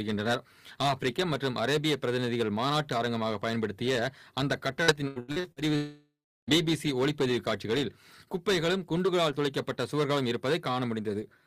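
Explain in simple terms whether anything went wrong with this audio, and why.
Three things went wrong. Hard clipping runs through the whole clip: the level was pushed too high, so the loudest peaks get chopped flat, adding a harsh, crackly fuzz. From 4.83 to 5.62 s there's repeated packet loss (robotic sound). Six short chunks went missing, the longest about 82 ms, and nearly half that stretch is patched over, so it sounds choppy. Then from 5.76 to 6.50 s there's a gap that's likely a long network dropout. The sound smears into a fading buzz, then about a third of a second of silence, and the lost part never comes back.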